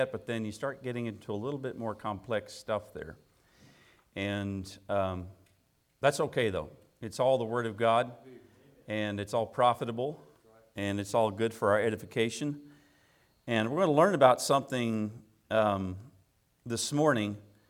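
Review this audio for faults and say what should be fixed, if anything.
Nothing here needs fixing, since there's no fault to be heard anywhere in the audio.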